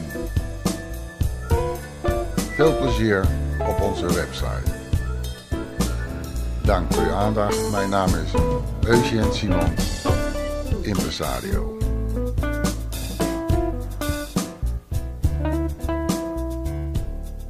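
No technical faults are audible.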